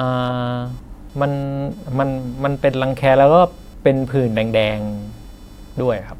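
Computer activity noise runs throughout the speech. A thin buzz rides under the talking, pulsing at around 500 times per second and sitting roughly 35 dB below the speech. It comes from the computer itself. Shifting load in the processor, graphics hardware or mouse disturbs the ground that the audio circuit shares, and those current swings leak into the signal. The buzz therefore follows the machine's activity rather than the speech, so it persists through pauses as well.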